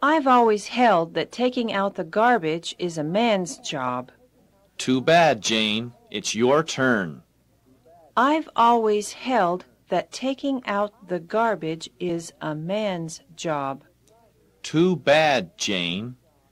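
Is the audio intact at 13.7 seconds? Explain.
Yes, the audio is intact at 13.7 seconds, with no dropout, distortion or other fault audible at that point.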